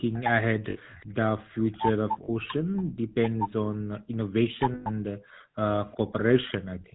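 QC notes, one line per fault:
Throughout: GSM full-rate codec. Buzzy, gravelly roughness fitting the 13 kbps coder; the spectrogram shows blurred pulse-driven harmonics and nothing above 4 kHz.
0.00–1.49 s and 3.57–6.95 s: background gated by the echo canceller. Room sound drops by about 40 dB, for about half a second, then about a second and a half in total. The waveform shows flat gaps in the noise floor.
0.13–1.77 s: echo leak. A faint copy of the sound trails 359 ms behind, about 20 dB down, likely loudspeaker pickup the canceller missed. The spectrogram shows a weak delayed ghost.
0.70 s (60 ms), 2.24 s (40 ms), 4.74 s (120 ms): lost GSM frames. Sound freezes into a metallic ring, fitting about three, two and six frames. The spectrogram shows smeared, repeated bands.
1.77–3.40 s and 4.55–5.77 s: speech suppressed in double talk. The talker is turned down, about 25 dB then about 40 dB, likely from overlapping talk. 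The waveform shows notched gaps mid-phrase.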